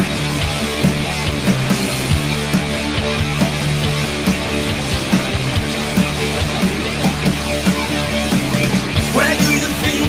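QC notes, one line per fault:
No faults found on review; nothing to flag.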